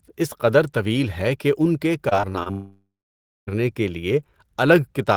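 From 2.09 to 2.48 s the speech turns choppy and robotic: repeated packet loss (robotic sound). Four short holes, the longest about 24 ms, are patched by repeating the preceding audio, so roughly a fifth of that stretch is synthetic fill. On a spectrogram this shows as brief smeared or frozen harmonic bands breaking the normal formant movement. The waveform shows short repeated cycles where the speech should change.

At 2.52 s a long network dropout follows and lasts until 3.49 s, almost a full second. The audio that should have arrived in that window is never heard. The last sound is stretched into a fading buzz, and then about 0.59 s of silence follows before speech resumes with that portion missing. A spectrogram shows a held, decaying smear and then a blank band. The waveform shows the envelope dwindling to flat. Losing this many packets in a row is the likely cause.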